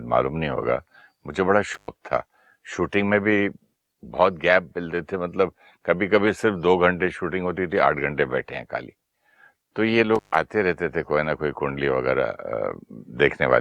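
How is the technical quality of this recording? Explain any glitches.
The recording has two short dropouts caused by an intermittent contact. At 1.74–1.88 s and again at 10.15–10.36 s, a loose cable or plug briefly breaks the signal path for about 110 ms and 129 ms. The speech cuts out, with crackle where the contact breaks and remakes and faint hiss during each gap.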